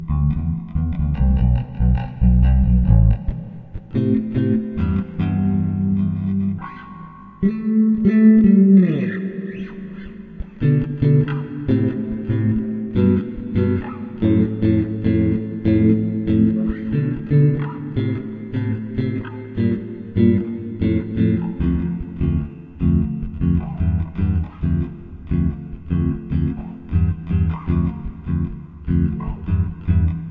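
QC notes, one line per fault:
No technical fault can be heard anywhere in this recording of sounds; the signal stays continuous and intact throughout.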